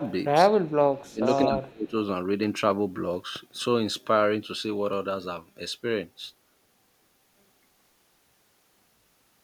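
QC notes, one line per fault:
0.00–0.15 s, echo leak: the far end's echo canceller likely let loudspeaker pickup through, so a copy of the speech returns 205 ms late, about 15 dB down.
0.45–0.66 s, 0.92–1.25 s, 1.46–1.94 s, speech suppressed in double talk: with both sides talking, the canceller likely ducked the talker too, dropping speech by roughly 20–25 dB in dips.
1.67–1.71 s, echo leak: another brief scrap of uncancelled echo, likely from the same canceller, arrives 215 ms late and very faint, around 35 dB below speech.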